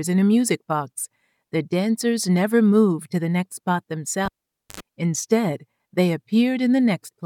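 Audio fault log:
4.25 to 4.80 s, cable pulled and plugged in: a pop as the lead comes out, about half a second of near silence, then roughly 80 ms of 50 Hz mains buzz while only the tip touches, and a second pop as contact returns.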